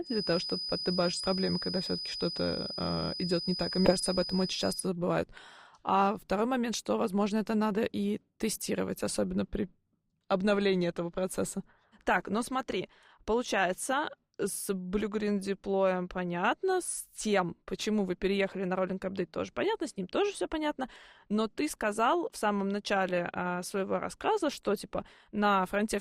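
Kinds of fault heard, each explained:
Feedback whistle: a thin 5 kHz tone sits about 10 dB under the speech, swelling and fading slowly in level but never building into a howl. It likely comes from a loop held at feedback's edge.
Compressed frames skipped: at 1.21 s and 3.85 s the speech leaps ahead roughly 300 and 70 ms in whole 20 ms frames.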